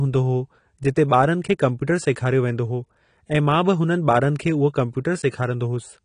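Throughout, the speech is dull and smeared, with plainly audible warbling and nothing above 10.1 kHz, likely AAC compression starved of bits, consistent with roughly 32 kbps.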